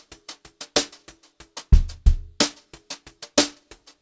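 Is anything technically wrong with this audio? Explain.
Yes. Aliasing runs through the whole clip. Energy above 8 kHz has folded back down below it, roughly 20 dB under the main signal, which fits a drop from 48 kHz to 16 kHz without an anti-aliasing filter. High content sounds gritty and metallic.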